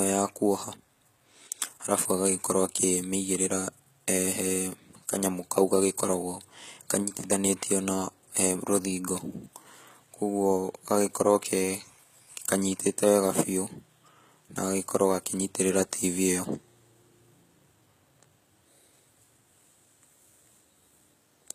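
Throughout the speech the treble sounds bright but synthetic: s sounds turn gritty and lispy, and nothing sits above about 14.9 kHz. That is likely HE-AAC compression, at a rate that fits roughly 20 kbps, rebuilding highs from copied lower bands, unlike a plain low-pass cut, which would sound dull.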